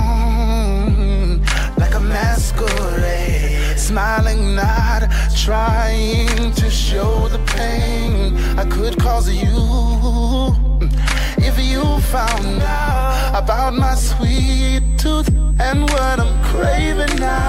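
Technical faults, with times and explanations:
14.36 to 17.48 s, USB whine: a thin, steady, high-pitched whistle fixed at 8 kHz rises out of the sound and holds to the end, sitting roughly 25 dB below the main signal. The pitch points to the 125-microsecond microframes of a USB connection. Each microframe pulls a burst of current, and that regular ripple leaks through the shared power or ground into the audio path, where it is heard as this constant tone.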